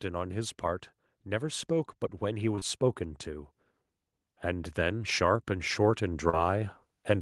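Automatic gain rising runs from 0.05 to 3.54 s in this speech clip, lifting about 4 dB, and again from 4.46 s to the end. The level control judged the input too quiet, so voice and background swell together. Short concealed packet loss hits at 2.55 to 2.63 s as two back-to-back 20 ms gaps, and at 6.29 to 6.35 s, where 40 ms never arrived. The receiver extended the preceding sound to cover each hole, leaving a brief smear or wobble.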